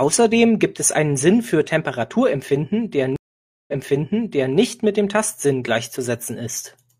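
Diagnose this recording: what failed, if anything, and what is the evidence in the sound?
Stream reconnect from 3.16 to 4.56 s, a network-stage failure. The speech cuts to about 0.52 s of silence while the player re-establishes the connection. A fresh decoder then resumes roughly 0.88 s earlier, as the server resends a buffered burst, so material repeats.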